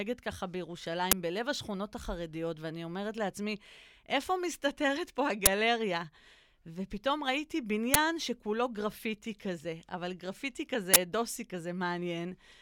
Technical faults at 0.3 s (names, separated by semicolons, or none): none